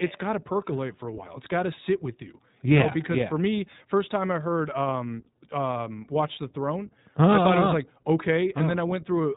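Throughout the speech, the signal has passed through the iLBC codec, which fits 20 ms frames at about 15.2 kbps. Each frame's excitation is coded independently, and everything above 4 kHz is cut, so the speech sounds muffled, plainly rough and somewhat synthetic.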